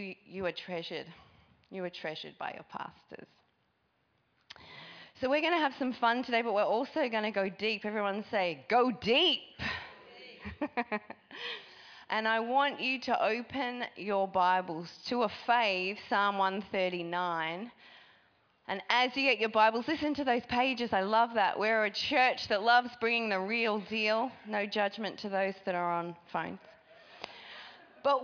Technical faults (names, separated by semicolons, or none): none